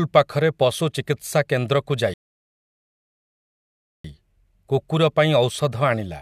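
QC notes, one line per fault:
2.14–4.04 s, rebuffering stall: the speech cuts to silence for about 1.9 s, then picks up exactly where it left off. Nothing's missing. The player just ran dry of downloaded audio and sat waiting for more, so the gap simply adds time.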